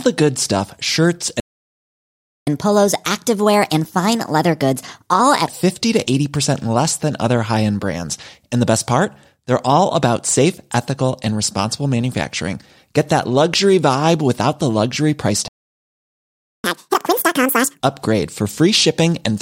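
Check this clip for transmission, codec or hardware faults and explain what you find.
The speech stops dead twice and, each time it resumes, runs fast and high-pitched for a while. These are playback stalls, each followed by catch-up at higher speed.

Playback stall, 1.40 to 2.47 s and 15.48 to 16.64 s: the speech cuts to silence mid-flow for a little over a second each time, about 1.07 s and then 1.16 s, before resuming. The likely cause is the player's buffer running dry or its output thread being held up, so nothing reached the output until data or processing time came back.

Catch-up at higher speed, 2.47 to 5.47 s and 16.64 to 17.80 s: immediately after each gap the speech rushes and rises in pitch, then settles back to normal. The first stretch runs at 1.25 times normal speed, lifting pitch by about four semitones over three seconds. The second is much harsher, at double speed and nearly ten semitones up, squeezed into just over a second. 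The player is resampling its backlog to recover the time lost in the stall.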